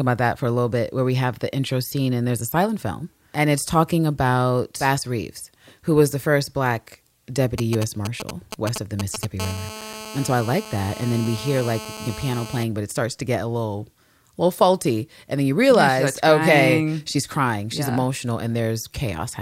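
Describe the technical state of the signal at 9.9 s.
At 9.9 s you're inside a stretch of GSM phone buzz running from 9.40 to 12.64 s, ending just before "but it starts to". A nearby 2G phone on a call pulses at 216.7 Hz, and the audio circuit rectifies those bursts into a steady, raspy, harmonic-rich buzz about 14 dB under the speech.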